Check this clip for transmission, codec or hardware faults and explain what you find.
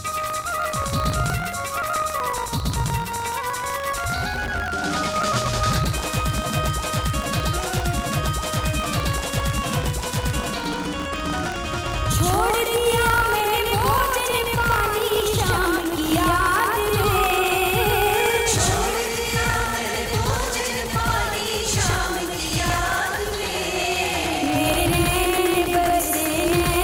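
Two faults run through the whole clip.

Doubled audio track: A second copy of the signal is likely being mixed in, probably captured again by a slower path. It trails the original by around 150 ms at roughly equal level, giving a dry, full-band slapback echo with no reverberant tail.

Buffer tearing: The writing program and the reading hardware have slipped out of step and cross inside every buffer period, so a small sliver of each buffer carries audio from about 40 ms earlier, with hard joins. The result is a steady 50 Hz robotic buzz that is heard only while sound is present, which fits a 20 ms buffer period.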